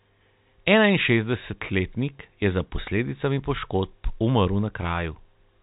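No technical faults can be heard in the speech. The G.711 telephone coding limits the band to nothing above 4 kHz, and its quantisation noise is at most faint, riding about 38 dB under the signal and rising and falling with it.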